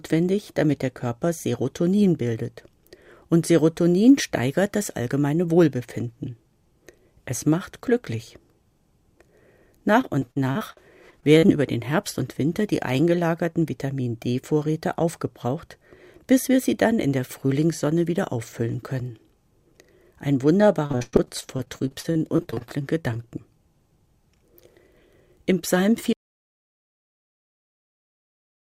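From 10.01 to 11.5 s, and again from 20.58 to 23.18 s, repeated packet loss makes the sound choppy and robotic. Ten short holes, then 23 holes up to 104 ms long, are patched by repeating the preceding sound, leaving smeared, frozen-looking slices on a spectrogram.

At 26.13 s the audio drops out to silence and stays gone until the end, likely from the input being lost while the recording continued. The waveform goes flat, and the spectrogram goes empty, with no room tone.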